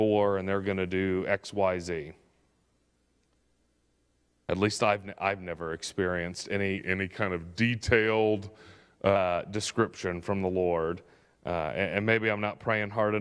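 From 6.78 s to 9.16 s the speech has a wrong sample rate fault. Here the audio is played slower than it was captured, with no rate conversion. Speed and pitch drop together. The passage runs at about 0.92 times normal speed. Pitch falls by about 1.5 semitones. The ratio fits material recorded at 24 kHz but played at 22 kHz. The voice sounds lower, heavier and slightly dragged, then snaps back at 9.16 s.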